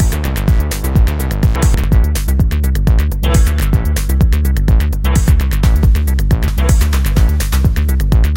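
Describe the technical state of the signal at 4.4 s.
At 4.4 s the signal is intact, with no dropout, distortion, glitch or other audible fault at that point.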